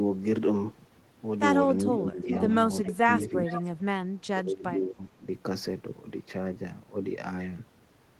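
Speech suppressed in double talk first appears from 1.79 to 2.29 s, where the speech dips by about 10 dB for roughly half a second. When both ends talk at once, the echo canceller likely mistakes this talker for loudspeaker echo and turns both down.

Echo leak overlaps it at 1.92 to 1.96 s, a brief delayed copy of the speech arriving about 381 ms late and about 10 dB below it. The far end's canceller likely failed to remove everything its microphone picked up from its loudspeaker.

Suppression returns from 2.82 to 3.05 s with a sharper dip of about 15 dB, though only around a tenth of a second of sound is actually pulled down.

The echo leak comes back from 3.20 to 3.71 s as a longer trailing copy about 419 ms behind the speech and about 10 dB quieter.

The deepest suppression runs from 4.14 to 5.28 s. The speech drops by up to about 25 dB across roughly a second, likely while the other side is talking.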